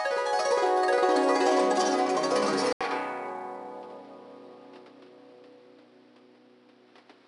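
From the start, the music carries plainly audible 4-bit ADPCM compression. Each sample is coded as a small step from a predicted value, so the coding error rides along with the signal. Loud passages pick up a gritty hiss, and sharp attacks turn rough. Nothing is heard above 10.7 kHz. The grain fits a rate of about 89 kbps.

At 2.73 s the audio drops out for 80 ms. It returns duller and boxier, with nothing above 6.2 kHz. A new noise floor sits some 30 dB under the music. The loudness stays about the same. The change runs to the end. The likely cause is the input being switched to a poorer device in mid-recording. That device passes a narrower band and brings its own noise.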